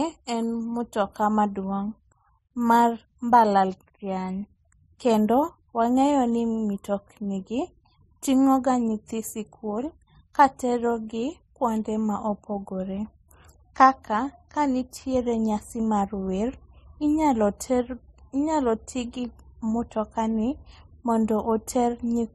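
Throughout, the speech has nothing above 13.7 kHz and carries layered coding artefacts, likely from transcoding between lossy codecs, consistent with low-bitrate MP3 re-encoded to AAC-LC.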